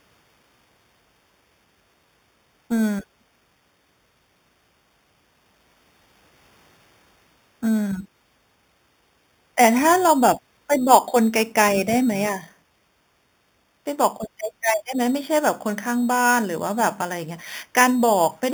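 Throughout, the speech carries imaging from sample-and-hold upsampling. Each 8 kHz sample was simply repeated up to 48 kHz without smoothing. A metallic fizz at about 15 dB below the speech mirrors it between 4 and 8 kHz.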